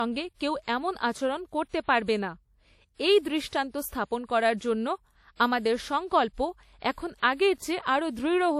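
Speech runs the whole clip with nothing above 16.2 kHz and the artefacts of a coarse encoding. This is low-bitrate audio saved at a high bitrate, likely a roughly 48 kbit/s encode re-saved at 192 kbit/s. Unlike plain low-bitrate encoding, the file's generous rate contradicts its damage.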